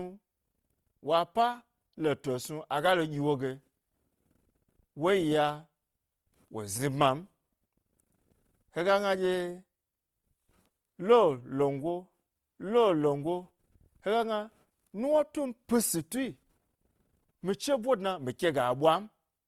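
Grainy, rough texture runs through the whole speech recording, with voiced sounds turning plainly noisy and harsh rather than swirling. That points to likely Opus compression in its music mode, which fits a low bitrate around 24 kbps, keeping band energies but filling gaps with folded or noise content while still reaching about 20.2 kHz.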